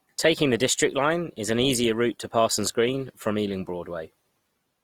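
It's a short speech clip with Opus compression damage running the whole way through: the band stays full and open, but tones come out grainy and rough rather than swirly. That's likely Opus in its music mode, and it sounds like a low rate, around 24 kbps.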